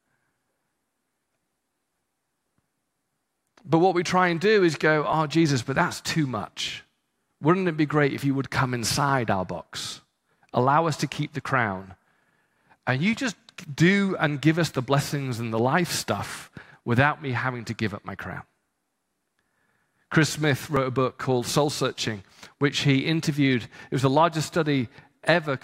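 At 6.68 s and again at 20.76 s there is a small jump in the sound. Both are likely a dropped buffer (overrun), each losing a few milliseconds. Unlike a dropout, no silence is heard; the audio simply skips ahead.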